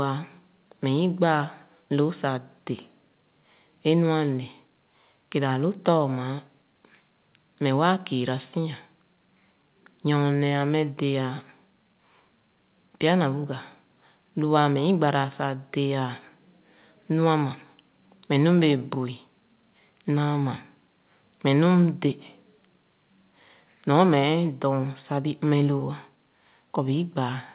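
Nothing stood out on listening to this speech recording, which comes through a call path with no content above 4 kHz, consistent with a 64 kbps G.711 A-law codec.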